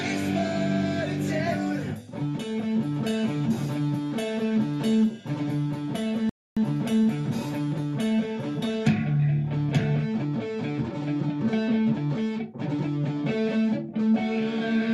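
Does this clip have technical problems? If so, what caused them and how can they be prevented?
Yes. A rebuffering stall occurs from 6.29 to 6.57 s: the sound drops to silence for about 0.27 s and then picks up exactly where it left off. The player exhausted its stock of downloaded audio and had to wait for more data before continuing, so nothing is skipped, but roughly 270 ms of dead air is inserted into the timeline. Preventing it means buffering further ahead, using adaptive bitrate switching, or providing a steadier network connection.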